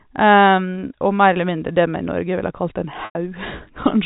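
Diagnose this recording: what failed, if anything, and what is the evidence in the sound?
Packet loss with pitch repetition at the network stage: about 100 ms went missing from 3.05 to 3.15 s, just after "ville kalt en", which fits ten 10 ms packets. Concealment repeated the last pitch period, giving a buzzy hold that fades before the speech cross-fades back.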